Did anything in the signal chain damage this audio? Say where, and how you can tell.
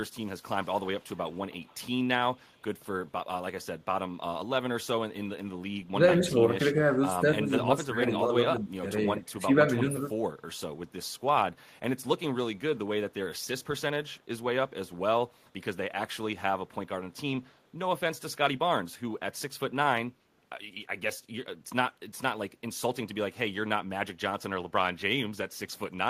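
Yes. The call processing is at fault, likely the far end's echo canceller passing back part of what its loudspeaker played. This is an echo leak: from 0.20 to 0.44 s and again from 0.62 to 1.81 s, a faint copy of the speech trails the original by about 197 ms. It sits about 40 dB below the speech at first, then rises to about 30 dB below, adding a doubled edge to the speech.

The same call processing also shows speech suppressed in double talk, likely because the echo canceller could not tell the local talker from loudspeaker echo while both sides spoke and so attenuated everything. Between 5.92 and 8.86 s, and again from 9.04 to 10.11 s, the speech dips by up to roughly 15 dB in patches. That adds up to around two seconds of loss in the first span and under a second in the second.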